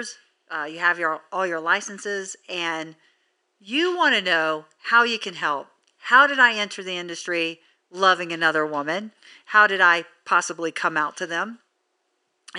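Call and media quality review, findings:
No system fault found in the speech signal; the only background is ordinary room noise picked up at the microphone, sitting about 52 dB below the speech level.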